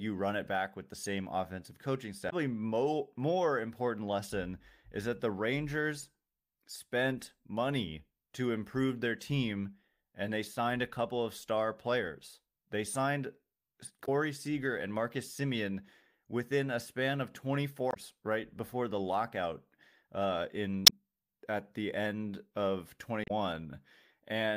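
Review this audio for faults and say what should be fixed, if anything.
Damaged data in the compressed stream: corrupted frames make the decoder misread them and lose sync while hunting for the next valid header. This leaves brief glitches in the speech at 2.26–2.33, 14.02–14.08, 17.88–17.97, 20.83–20.93 and 23.24–23.31 s. Checksums with retransmission or re-fetching of corrupted segments would prevent it.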